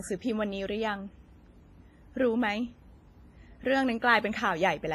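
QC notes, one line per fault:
Throughout, WMA compression: ringing, washy hiss breathing with the speech and nothing above 15.5 kHz; likely coarse quantisation smeared over long transform blocks, which fits roughly 24 kbps.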